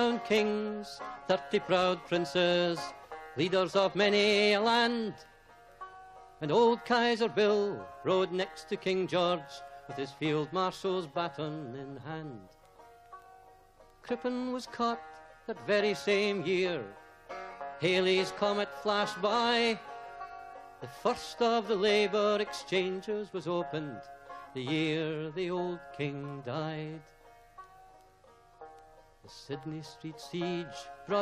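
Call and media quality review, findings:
No audible faults found.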